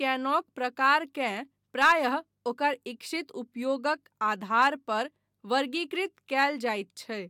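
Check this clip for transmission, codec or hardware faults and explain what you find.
Nothing in the recording points to a fault of any kind. The speech holds together as one continuous signal, and there is nothing to report.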